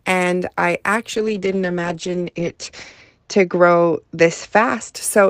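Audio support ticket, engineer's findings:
Call bitrate drop, 1.17–4.99 s. Bandwidth estimate collapsed and the encoder was throttled, which fits a fall from roughly 32 to 9 kbps. Coarser Opus coding and the audio band narrowing from 20 kHz to 8 kHz make the speech rough and muffled, worst for about 1.9 s.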